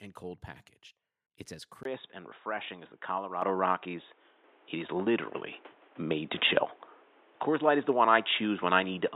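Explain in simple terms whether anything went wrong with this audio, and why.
The microphone volume stepped up twice, at 3.42 and 4.44 seconds. The call software raised the input level suddenly, so the voice and background jumped louder together.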